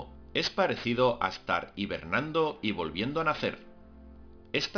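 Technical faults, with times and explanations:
Throughout, aliasing: the audio was brought down to an 11 kHz sample rate without filtering first, so content above the 5.5 kHz fold point mirrors back as unrelated, gritty tones roughly 15 dB below the signal. A spectrogram shows energy crowding hard against the band edge with mirrored, wrong-sloping traces.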